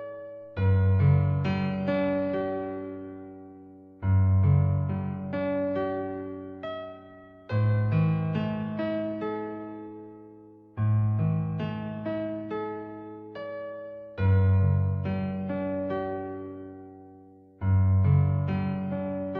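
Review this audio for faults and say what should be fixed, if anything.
Nothing in these everyday sounds needs fixing, as no faults can be heard anywhere in the recording. No repair or preventive change is called for.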